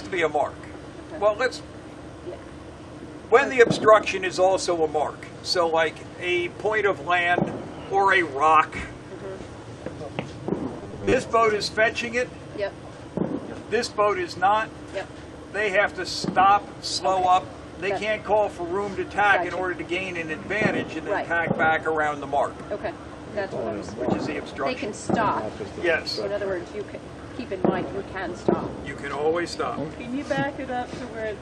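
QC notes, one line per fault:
10.81–11.13 s, robotic sound from repeated short buffers: a rigid, metallic 100 Hz buzz, likely from late-arriving audio, with 10 ms chunks looped over roughly half the span.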